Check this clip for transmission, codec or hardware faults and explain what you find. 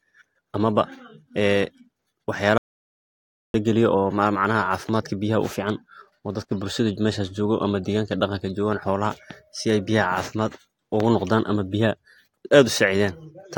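One fault is present: an audio dropout to silence from 2.58 s to 3.54 s, removing about 0.96 s of the speech. The signal stops abruptly mid-flow and returns just as abruptly, and the gap is silent with no room tone underneath. The input was likely lost upstream, through a disconnected device, a failed link or an accidental mute, while the recorder kept writing silence. Whatever was spoken in that interval is unrecoverable.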